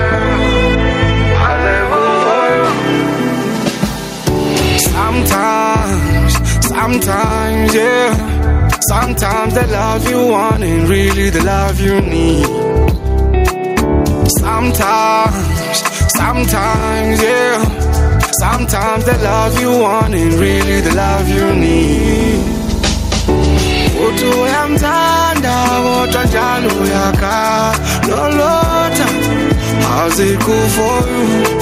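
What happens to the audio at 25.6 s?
At 25.6 s, gain pumping runs through, as everywhere. Loud and soft parts sit closer in level and the sound is squashed, the gain swinging around 10 dB, likely from an overdriven limiter.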